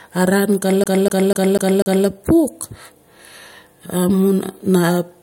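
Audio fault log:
0.84 to 2.07 s, CD stuck on one turn: the same 0.25 s slice of speech plays five times in a row, each pass cut off by a brief mute as the laser jumps back a track at a damaged spot on the disc, which produces a fast, mechanical stutter at about four repeats per second. On a waveform the segment shows five identical blocks separated by thin gaps; a spectrogram shows the same pattern tiled across that span with narrow silent seams.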